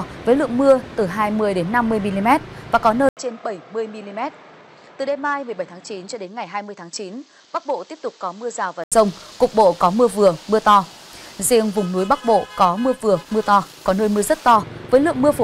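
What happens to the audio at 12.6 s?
Nothing goes wrong at 12.6 s; the audio plays through that moment intact, with no dropout, click or distortion.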